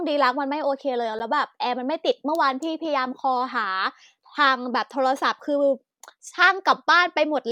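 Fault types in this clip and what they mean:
Block of digital silence: a single tick at 1.19 s, where the speech drops out for 10 ms, a block of samples zeroed with hard edges.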